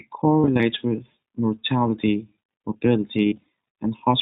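Throughout, the speech carries iLBC codec damage: a narrowband sound with nothing above 4 kHz, plainly rough and synthetic. The coarse excitation texture fits iLBC's 20 ms mode at 15.2 kbps, and it is grainier than the smoother dullness of a simple low-pass or G.711 path.

From 0.40 to 0.61 s, just before "with mortality", lost iLBC frames break the speech. About 100 ms of audio is missing across short gaps spread over 200 ms, the longest only a few tens of milliseconds. Each gap is filled with a held, buzzy vowel-like repeat of the last pitch cycle. The speech recovers almost at once, without the smeared recovery of codecs that depend on earlier frames.

From 3.23 to 3.46 s, a second cluster of lost frames removes about 140 ms over 240 ms. Its longest gap is under a tenth of a second, filled with a held, slightly buzzy or breathy repeat rather than cutting to silence as a plain dropout would.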